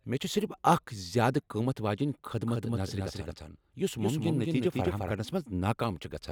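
From 2.48 to 5.12 s, a doubled audio track. A quieter copy lags roughly a fifth of a second, likely from a second capture path.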